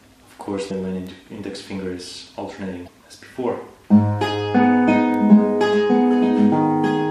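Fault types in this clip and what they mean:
Damaged data in a compressed stream: corrupted bytes made the decoder misread frames and lose sync, producing two brief glitches of about 44 ms, at 0.67–0.71 s and 2.84–2.88 s. Spectrograms show a short disruption at each spot.
Bit error spike: one flipped bit threw a single sample off by a power of two before it snapped back, heard as a sharp tick at 1.07 s and 5.14 s. The waveform shows a one-sample needle; the spectrogram, a thin full-band vertical line.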